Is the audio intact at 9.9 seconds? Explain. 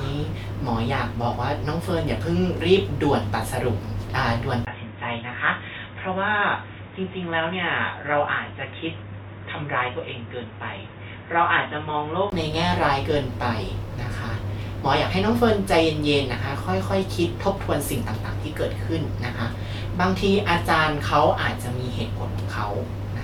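No, at 9.9 s the speech sits inside a dull, boxy stretch from 4.65 to 12.32 s, likely an input switched to a poorer device: nothing above 3.8 kHz, a bit quieter, with new background noise.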